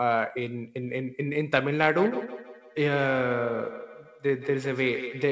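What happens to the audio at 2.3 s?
At 2.3 s the speech is inside a feedback echo between two devices, running from 1.97 s to the end. A second device replays the sound, its microphone returns it, and neither echo canceller removes it, so repeats arrive roughly every 150 ms, at most about 10 dB below the speech.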